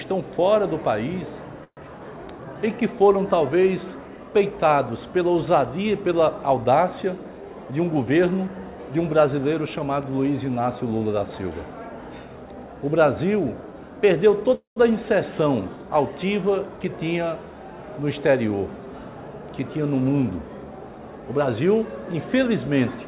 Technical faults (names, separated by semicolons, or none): call audio freeze; jitter buffer speed-up